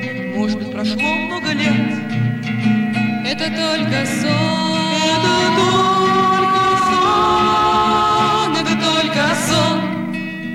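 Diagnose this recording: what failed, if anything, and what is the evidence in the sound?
Hard clipping from 4.32 to 5.80 s. Peaks exceed the converter's range by about 2 dB and are cut flat, adding crackle on loud moments.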